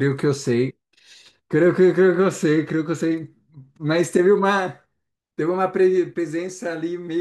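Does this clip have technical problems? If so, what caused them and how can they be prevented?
No, no technical faults detected.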